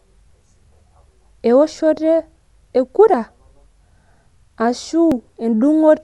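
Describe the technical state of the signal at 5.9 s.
At 5.9 s you're hearing the same damage that runs through the whole clip: dull speech with nothing above about 11.4 kHz and a rough, fluttery noise around voiced tones. That's likely Dolby Digital compression, with an encoder starved at a low rate, maybe around 64 kbps, narrowing the band, and the decoder filling bit-starved lines with dither noise.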